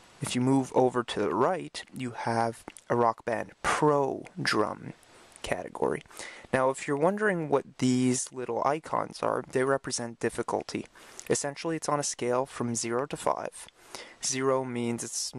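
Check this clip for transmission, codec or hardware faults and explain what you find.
No transmission, codec or hardware faults turn up anywhere in this clip.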